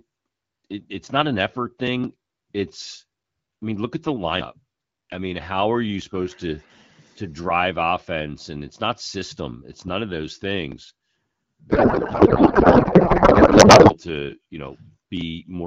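A codec payload misread hits this speech clip from 11.70 to 13.97 s: the receiver unpacks octet-aligned AMR frames as if they were bandwidth-efficient, so every field lands in the wrong place while the frames still look valid. For those 2.3 seconds the speech gives way to garbled noise and warble that barely tracks it. The AMR wideband (HD Voice) coding around it sounds clear, consistent with roughly 12.65 kbit/s.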